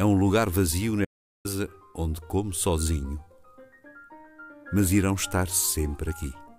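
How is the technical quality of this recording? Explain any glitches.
There is one glitch, an audio dropout to silence. From 1.05 to 1.45 s the sound cuts to dead silence with no room tone for about 400 ms. Likely the input signal was lost while recording carried on writing silence.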